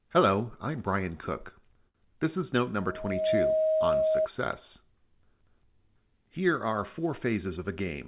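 At 1.88 s a short stall from a late packet holds the sound for about 63 ms, to 1.97 s. The jitter buffer ran dry, so the receiver stretched the last bit of audio until the packet turned up, then resumed exactly where it left off. Nothing is lost; the playout just runs 63 ms later from here on. That separates it from a dropout or a concealed loss, where audio is actually missing and you hear a gap or a smeared substitute.

Right after "is note", at 2.80 s, a loudspeaker feedback squeal begins: a single steady tone at 630 Hz that swells over roughly half a second and sits about 5 dB above the speech until 4.28 s. The microphone was picking up the loudspeaker it feeds, and at 630 Hz the loop gain exceeded one, so that frequency kept reinforcing itself. Its fixed pitch and gradual build-up distinguish it from a tonal codec artefact or an electrical hum, which would be present from the start rather than growing.

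After "are four", from 7.47 s to 8.05 s, a jitter buffer speed-up plays the audio at 105% speed, trimming away roughly 40 ms in small pitch-period slices to shrink a buffer that had grown too full. The pitch stays put while the timing hurries slightly, unlike a sample-rate error, which would shift pitch along with speed. Throughout, nothing above 4 kHz is present, which fits a narrowband G.711-style call codec.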